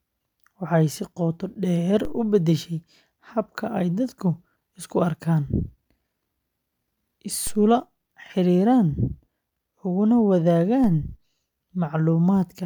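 At 2.05 s, 7.47 s and 10.84 s the speech carries a DC step, each heard as a short low thump. At each point the waveform's zero line jumps by about -23 dBFS, then bleeds away rather than holding, at the rate of a 2 Hz high-pass. The sudden shift in offset is what produces the thump. The speech itself continues through each step unchanged.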